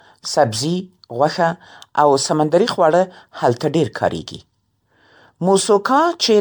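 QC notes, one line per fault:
Throughout, generation loss: speech sounds swirly, hollow and smeared, with blurred attacks. Likely about seven MP3 re-encodes, fitting 96 kbit/s, each adding fresh quantisation noise.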